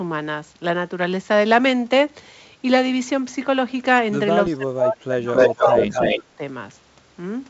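A speech recording over a wideband call, band-limited near 7.7 kHz, which fits G.722 at 64 kbit/s. From 4.48 to 5.92 s the voice dips and breaks up for about a second in total, falling as much as about 30 dB. A shorter dip of about 20 dB follows from 6.15 to 6.41 s. This is speech suppressed in double talk, likely because the echo canceller could not tell the talker from loudspeaker echo while both sides spoke. A delayed copy of the voice, 275 ms late, is also heard. A brief scrap at 5.10 to 5.14 s sits about 10 dB below the speech. A longer stretch from 5.35 to 6.19 s is roughly as loud as the speech. This is echo leak, likely from a loudspeaker whose canceller let its own pickup through.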